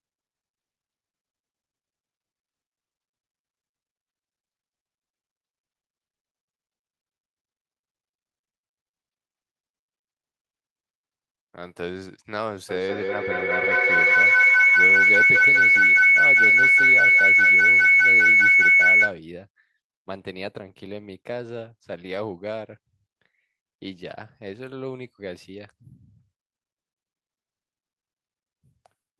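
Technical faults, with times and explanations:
12.69 to 19.23 s, feedback howl: a shrill tone near 2 kHz swells to about 14 dB above the speech, pulsing roughly every fifth of a second, because a microphone keeps picking up a nearby loudspeaker and each trip around that loop adds gain.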